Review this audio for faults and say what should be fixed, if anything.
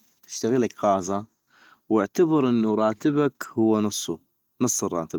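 Nothing here needs fixing: the speech comes through its 24 kbps Opus voice coding with no fault worth chasing.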